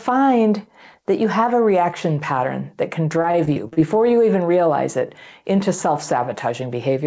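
In this speech clip, from 3.22 to 4.15 s, between "reaction pattern that can" and "even realize it into", the sound turns choppy and robotic, with tiny holes and buzzy smeared fragments. This is repeated packet loss: over that stretch audio packets kept going missing, and each gap, the longest about 37 ms, was patched by stretching the preceding sound, concealing roughly a sixth of the span. The call path's G.722-style coding leaves nothing above 8 kHz.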